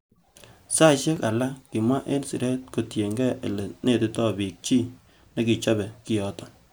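At 1.16 s, just before "alak kimwa en siret", the speech drops out in a block of digital silence lasting about 4 ms, which points to the output buffer not being filled in time and zeros being sent in its place. The signal jumps straight to silence and back with no fade, so each edge makes an abrupt step. With so short a gap, the two edges merge into a single sharp tick rather than an audible hole.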